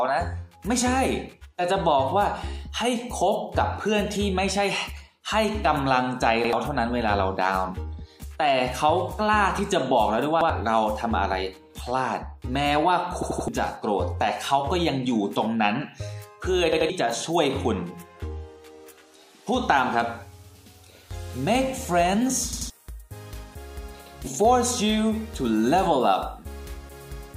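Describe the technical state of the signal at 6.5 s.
A repeated buffer occurs from 6.44 to 6.53 s. New audio did not reach the output in time, so the device played its last block a second time. That block runs about 85 ms, which fits a 4096-sample buffer. The same short stretch of sound is heard twice in a row, with a hard join where the copy begins. It comes across as a brief stutter. Roughly a tenth of a second of the original audio is lost.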